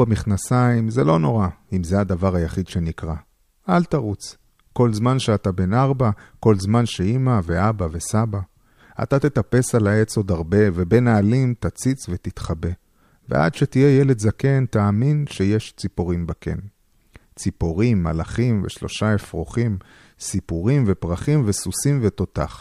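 No technical faults are audible anywhere in the speech recording.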